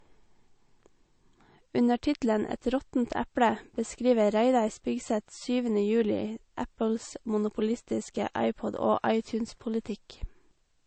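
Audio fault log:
Throughout: low-bitrate audio saved at a high bitrate. The speech was likely squeezed through a very low-rate MP3 encode, around 35 kbit/s, then re-saved at 192 kbit/s; the larger file cannot restore what was discarded, so nothing remains above 8.3 kHz and the first encode's artefacts persist.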